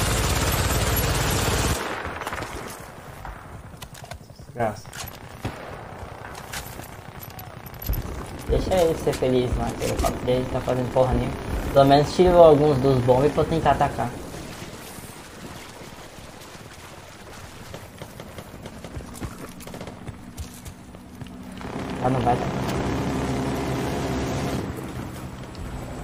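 From 8.46 s to the end, a wrong sample rate makes the sound run about 1.09 times faster and roughly 1.5 semitones higher, which fits 44.1 kHz material played at 48 kHz. Speed and pitch rise together, unlike a pitch-shift or time-stretch, which changes only one.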